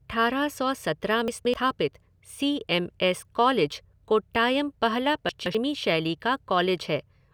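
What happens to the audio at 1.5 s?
Chunks out of order, from 1.28 to 1.54 s, just after "सौ सत्रह": one piece of the speech, about 85 ms long, plays two chunks late, after the two pieces that should follow it. Nothing is lost, but the three hard joins produce a brief jumbled, garbled moment.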